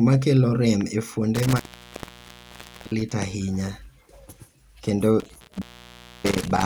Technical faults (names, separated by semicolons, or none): intermittent contact